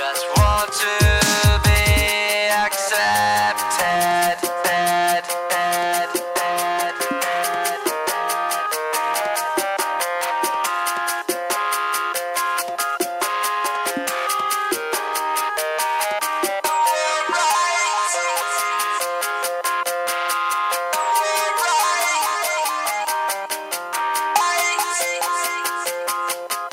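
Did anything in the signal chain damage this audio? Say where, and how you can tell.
Yes. A steady USB whine at 1 kHz runs under the whole clip, sitting roughly 30 dB below the signal. The damage happens at the analogue stage, through power or ground wiring shared with a USB device. The bus draws current in bursts once per 1 ms frame, and that ripple couples into the audio path as a fixed-pitch tone. Its constant pitch, locked exactly at 1 kHz, marks it as bus-frame interference rather than acoustic noise.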